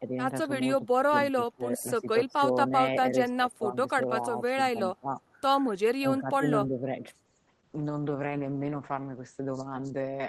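From 1.35 to 2.41 s, 4.2 to 5.21 s and 5.99 to 7.05 s, the speech dips in pieces, by about 20, 10 and 15 dB. Roughly 0.5, 0.4 and 0.5 s are hit. This is likely speech suppressed in double talk. The echo canceller mistook overlapping talk for echo and turned it down.

At 7.27 s a call bitrate drop sets in and lasts to the end. The encoder falls from 32 to 10 kbps. Coarser coding makes the sound rough. Bandwidth shrinks from 20 kHz to 8 kHz, muffling it.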